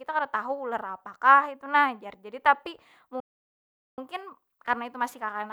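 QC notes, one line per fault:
3.20 to 3.98 s, playback stall: the speech cuts off in mid-flow and the output falls completely silent for about 0.78 s before the sound resumes. The gap is too long and too clean to be a dropout of a few samples, and nothing in the audio itself fades or decays into it. The likely cause is the player running short of data, or its audio thread being blocked, so nothing reached the output until it recovered and carried on.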